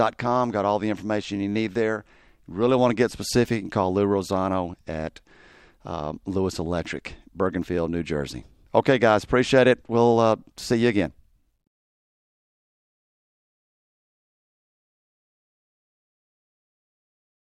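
No technical faults can be heard anywhere in the audio: the signal stays continuous and stable, with no breaks, level jumps or disturbances at any point.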